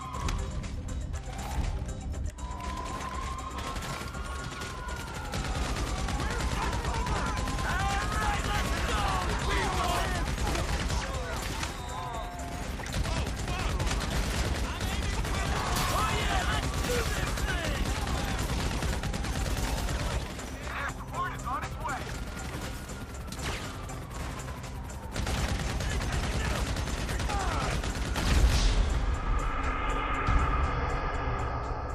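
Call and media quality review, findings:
Nothing stood out on listening, and there is no symptom to log against any component.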